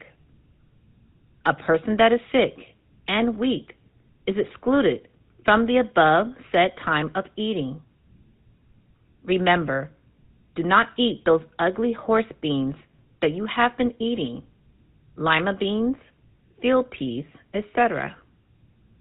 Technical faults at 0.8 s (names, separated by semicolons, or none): GSM full-rate codec